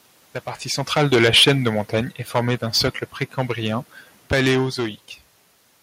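From the start the speech carries hard clipping. The signal arrives about 12 dB hotter than the stage can pass, so the loudest peaks, roughly one sample in twenty, are sliced flat. The result is a harsh fuzz on every stressed syllable rather than an occasional tick, and unlike a limiter's smooth squeeze, the flat tops spray bright harmonics high into the spectrum.

Between 0.95 and 2.66 s the automatic gain falls by 6 dB. The control judges the input too loud, or its background noise too strong, and eases its gain down over that stretch, so the voice sinks together with the room noise behind it. A talker leaning away, as happens near 0.5 s and 4.5 s, would leave that background steady, and that is the difference.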